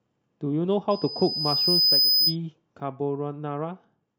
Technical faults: loudspeaker feedback squeal; sudden gain jump

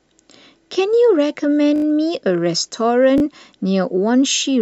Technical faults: repeated buffer

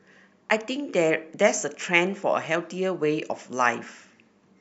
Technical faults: none

